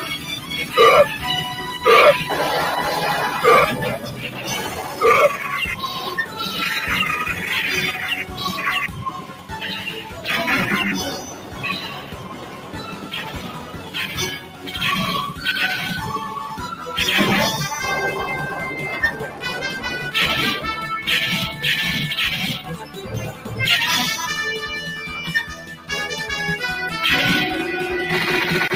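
Noise suppressor applied to music or sounds, throughout: a suppression stage tuned for speech is treating sustained, steady material in this sound as noise, so its gain swings by around 10 dB as the signal moves between sudden onsets and held or decaying content. Transients pass largely intact while sustained parts and tails are pulled down, which leaves the sound pumping and thinning in level instead of holding steady. Sound cut by the noise suppressor, at 0.01 to 0.74 s, 3.97 to 5.01 s, 5.75 to 6.39 s, 8.21 to 10.28 s, 11.13 to 14.76 s, 19.24 to 19.43 s, 22.61 to 23.56 s and 25.52 to 25.90 s: here the suppressor clamps down harder, by about 7 to 9 dB at its deepest. The longest stretch, 11.13 to 14.76 s, is held down for roughly three seconds.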